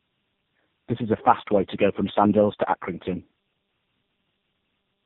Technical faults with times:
0.00-5.06 tandem speech coding

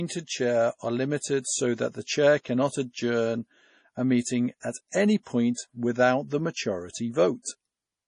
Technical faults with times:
0.00-8.08 MP3 compression

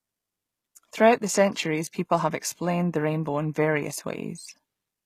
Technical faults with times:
0.00-5.05 HE-AAC compression

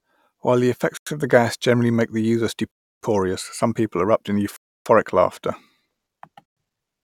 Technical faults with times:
0.97-1.07 Bluetooth stall
2.71-3.01 Bluetooth stall
4.56-4.86 Bluetooth stall
6.45-6.57 Bluetooth stall

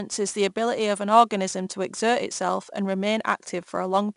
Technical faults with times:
0.00-4.16 4-bit ADPCM compression

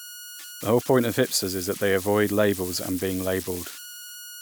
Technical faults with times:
0.00-4.41 converter idle tones

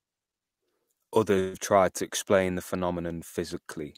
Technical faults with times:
1.39-1.55 burst of packet loss

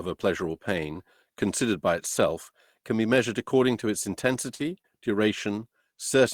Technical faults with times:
4.33-4.62 lost packet rebuilt from error correction
4.55-4.86 short concealed packet loss

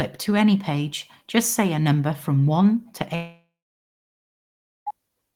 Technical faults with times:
3.15-4.88 long network dropout

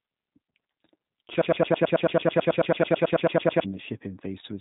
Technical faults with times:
0.00-4.60 G.729 codec
1.41-3.64 broken-record loop

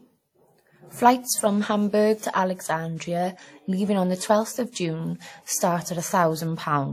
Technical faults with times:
0.00-6.93 WMA compression
4.72-4.75 pre-echo

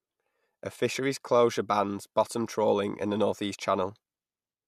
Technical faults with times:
none

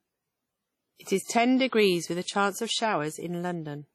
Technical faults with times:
0.00-3.94 WMA compression
1.04-1.07 pre-echo

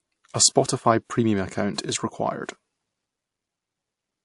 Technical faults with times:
0.00-4.24 transcoding between lossy codecs

